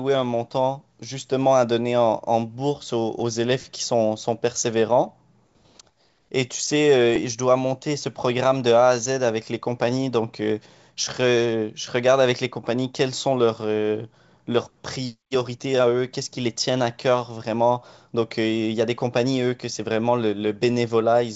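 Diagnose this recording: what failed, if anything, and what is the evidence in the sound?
Bit errors on an ADPCM link, at the transmission stage of this G.722 wideband speech call. Rough pops and bursts hit at 3.20 s, 5.05 to 5.08 s and 7.16 to 7.21 s. Each flipped bit upsets the decoder's step size and predictor, so the disturbance rings on briefly. The error rate sounds low, well under one percent.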